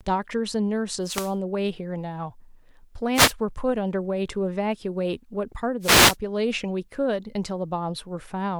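Three short swishes of static break into the speech, at 1.01 to 1.36 s, 3.14 to 3.34 s and 5.80 to 6.17 s. These are wireless microphone noise hits: the analogue FM radio link from the microphone fades as reflected signals cancel the direct one, so the receiver's own noise rises and, in a deep fade, breaks into clicks that cover the voice until the signal recovers.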